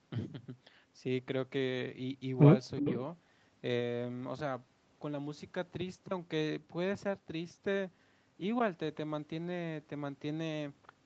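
At 2.78 s an echo leak begins and lasts until 2.94 s. A faint, delayed copy of the speech comes back, trailing the original by about 359 ms. It sits roughly 15 dB below the direct speech. The likely cause is a far end on a loudspeaker whose echo canceller did not fully remove what its microphone picked up.

Inside that window, from 2.81 to 2.85 s, the speech is suppressed in double talk. The level dips by a few decibels for a very short moment, about 40 ms. It sounds like a small duck in loudness, not a dropout. The likely cause is the echo canceller confusing the live talker with the returning echo and turning both down while they overlapped. Throughout, the call path's band limit is audible as nothing above 8 kHz.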